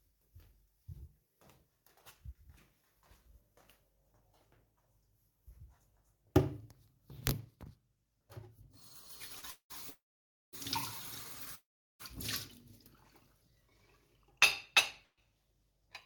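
At 9.39 s there's a short stall from a late packet. The jitter buffer ran dry, so the last sound gets held about 33 ms too long before carrying on. Then come call audio freezes at 9.51 to 9.72 s, 9.90 to 10.55 s and 11.55 to 12.01 s, each a fading buzz that drops into roughly 110, 540 and 380 ms of silence before the audio resumes where it stopped, likely packets held up in transit. At 13.46 to 13.71 s a jitter buffer slow-down repeats tiny pitch periods, adding 46 ms and running at 85% speed, so it drags at the same pitch. One more freeze at 15.04 to 15.20 s goes silent for about 80 ms.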